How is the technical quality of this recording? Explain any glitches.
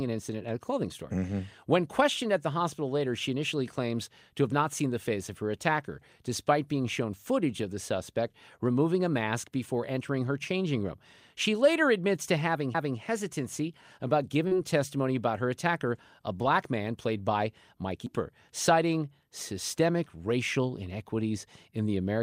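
The recording has three audible glitches: two CD skips and one short concealed packet loss.

At 12.74 s, just after "later admits to", a CD skip occurs: a jolt sends the laser to another spiral turn, giving a brief tick and mute of a few milliseconds before playback resumes elsewhere. The same CD skip recurs at 18.06 s, after "black man played by", as another tick and jump in the speech.

From 14.47 to 14.53 s, after "hesitancy about", comes a short concealed packet loss. About 40 ms of audio arrived too late, and the receiver extended the preceding sound for 37 ms before rejoining, heard as a brief smear just before "testimony about her attacker".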